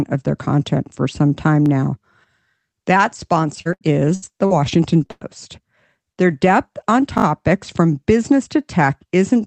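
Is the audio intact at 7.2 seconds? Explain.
No, there's a repeated buffer from 7.18 to 7.24 s, between "depth on" and "from business". New audio arrived late, so the same short chunk, which fits a 20 ms buffer, played again three extra times with hard joins, giving a quick stutter and barely any audio lost.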